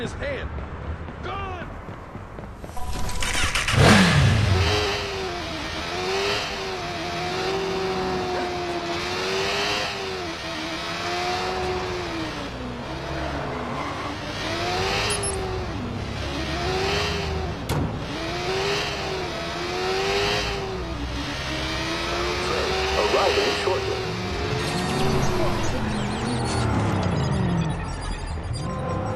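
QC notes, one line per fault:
5.37–5.39 s, 15.39–15.41 s, 25.41–25.43 s: overlapping chunks. The audio was handled in 10-second chunks, each starting 20 ms before the previous one ended, so a 20 ms slice plays twice at every join, heard as a brief click or stutter every 10 seconds.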